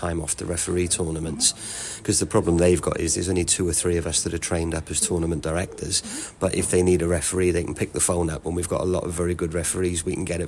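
No technical faults can be heard anywhere in the audio.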